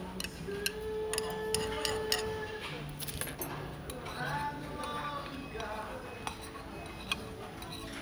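Nothing's technically wrong with this recording of sounds; it just sits there sounding like itself the whole way along.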